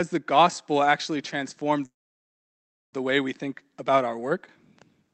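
Packets were likely held up in transit at 1.85 s, draining the jitter buffer and causing a call audio freeze. The receiver briefly stretched the last sound, then went silent for about a second until 2.95 s. Speech then resumes where it stopped, later but with nothing lost.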